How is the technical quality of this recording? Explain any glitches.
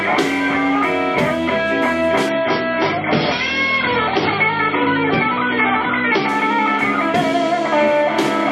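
The recording has one clear quality fault. From 2.29 to 6.29 s the stream drops to a lower bitrate, likely because the connection slowed. The switch is abrupt and gapless. Nothing remains above about 5.9 kHz, giving dull, smeared treble with audible codec artefacts, which fits a very low MP3 rate near 23 kbit/s.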